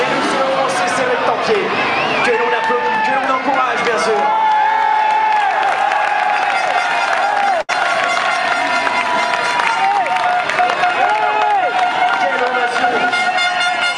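The audio has one clear fault, a burst of packet loss, from 7.61 to 7.71 s. Several packets in a row failed to arrive in time. For about 72 ms the receiver filled the hole by stretching the last sound it had and fading it down, so the sound smears into a held, dimming tail. Playback then jumps ahead. About 80 ms of the original audio is simply gone.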